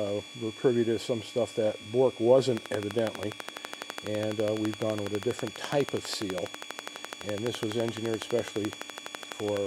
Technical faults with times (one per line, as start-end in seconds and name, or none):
2.57-9.58 train of clicks